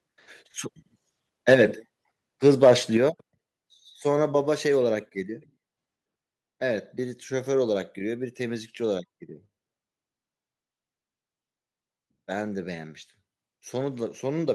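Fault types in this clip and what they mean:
Microphone overload: The microphone's input volume was likely set too high, so the loudest peaks ran past the converter's limit, by about 6 dB near 1.5 s and about 3 dB around 2.5 to 2.7 s, with their tops sheared off into a harsh, crackling edge on the speech.
Microphone volume stepped down: The call software likely reacted to that overload by cutting the microphone's input gain in single jumps, about 2 dB at 1.54 s during the first distorted burst, then about 6 dB at 2.97 s, so voice and background drop abruptly together.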